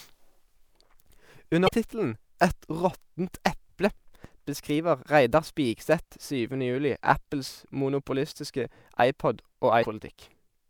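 Damaged data in a compressed stream breaks into the speech three times: from 1.65 to 1.69 s, from 7.14 to 7.17 s, and from 9.81 to 9.85 s. Each time, a stretch of the encoded bitstream has been corrupted, so the decoder misreads those frames, loses its place, and hunts for the next valid frame header before it can resume. The result is a brief chirp, squawk, click or short hole, each lasting a few tens of milliseconds.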